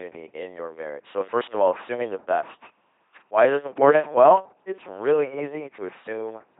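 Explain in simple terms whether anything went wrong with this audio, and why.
LPC-10 vocoder damage runs through the whole recording. The speech was rebuilt from a crude model that treats each instant as either buzz or hiss, so it sounds robotic and buzzy, with stray hiss or buzz, and nothing above 3.8 kHz.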